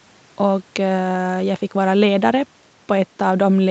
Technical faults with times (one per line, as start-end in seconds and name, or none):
none